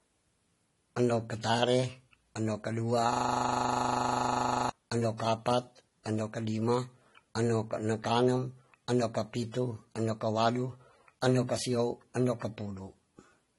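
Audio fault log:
Throughout: transcoding between lossy codecs. The speech has nothing above about 11.3 kHz, and two different sets of coding artefacts are audible together. This is likely a chain of roughly 48 kbit/s MP3 re-encoded to 32 kbit/s AAC-LC. The second encoder spent its limited bits reproducing the first one's damage while adding its own, and the lower bandwidth limit carried through.
3.13–4.69 s: system hang loop. Right after "katare endo kadua", the audio collapses into a rigid 25 Hz buzz that lasts about 1.57 s. Normal speech resumes with "endo ka apat endo". The buzz is one 40 ms slice of sound replayed exactly, about 39 times in a row. That fits the playback hardware continuing to read a roughly 40 ms ring buffer while the software feeding it was stalled. Because the slice is so short, the repetition fuses into a steady tone rather than a stutter.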